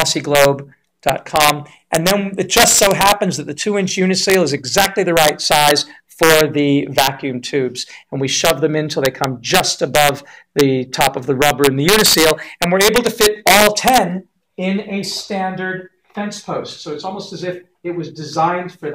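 Throughout, integer overflow: with about 2 dB of overdrive, a small fraction of loud peaks wrap to the opposite sign, giving violent cracks far sharper than clipping's flattened distortion.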